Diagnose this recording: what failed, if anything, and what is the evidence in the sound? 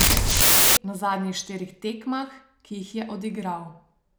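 Samples built from the wrong bytes, 0.0 to 0.77 s: a sample-format conversion fault, where misassembled bytes make the low bits dominant, giving loud, harsh broadband noise over the speech.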